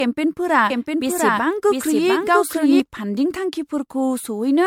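Throughout, the speech sounds swirly, smeared and hollow, with blurred attacks and nothing above 19.8 kHz: generation loss, likely from about five rounds of MP3 re-encoding, pointing to roughly 96 kbit/s.

From 0.70 to 2.80 s, a dry, full-band second copy trails about 0.7 s behind, roughly 5 dB quieter, starting and stopping abruptly: a doubled audio track, likely from an out-of-step duplicate path.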